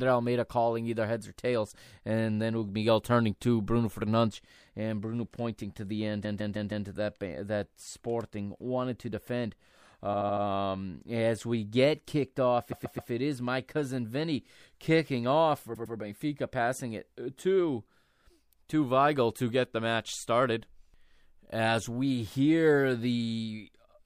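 Speech, with four bursts of repeated frames: a short block of compressed audio is played again several times, giving a stutter and lengthening the clip. At 6.23 s a 157 ms block repeats four times. At 10.13 s, after "wanted to defend", a 78 ms block repeats four times. At 12.71 s, between "we get kicked off" and "it is my cousin", a 131 ms block repeats three times. At 15.74 s, after "kicking off for", a 105 ms block repeats twice.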